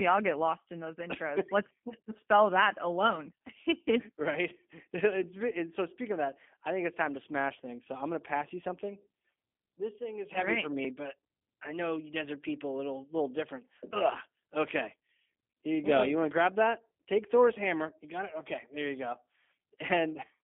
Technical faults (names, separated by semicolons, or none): G.729 codec